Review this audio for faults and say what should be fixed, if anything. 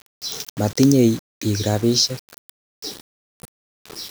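The speech sounds grainy throughout, with quiet tails dropping to silence or sputtering. That's likely low bit depth without dither, around 6 bits, rounded, leaving distortion roughly 25 dB down. Keep full resolution and dither before any reduction.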